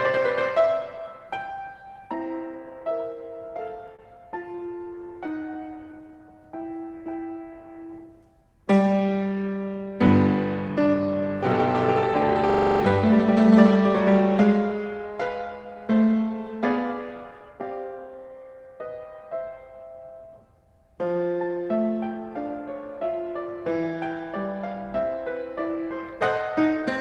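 Packets kept arriving late between 3.87 and 6.11 s, so the jitter buffer ran dry twenty times. Each gap, the longest 27 ms, was bridged by stretching the last sound, giving repeated stalls (stutter) that drag the audio while losing nothing. Overlapping that, from 5.84 to 7.47 s, a jitter buffer slow-down rebuilt its reserve by repeating pitch periods, adding 173 ms so the audio plays at 90% speed with unchanged pitch. Later the buffer overfilled and twice triggered a jitter buffer speed-up, trimming pitch periods to cut delay: 9.36 to 10.08 s runs at 110% with roughly 70 ms removed, and 10.68 to 11.29 s at 114% with about a tenth of a second gone, both sounding hurried. Finally, at 12.50 to 12.80 s, a system hang loop froze the machine while the hardware kept replaying one 42.67 ms buffer, which fits a 2048-sample ring buffer. It repeats seven times at a 23.4 Hz loop rate, replacing roughly 300 ms of audio.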